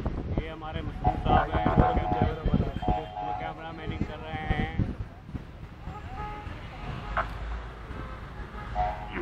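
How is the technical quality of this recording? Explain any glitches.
No glitches are audible anywhere in the recording, so there is nothing to explain.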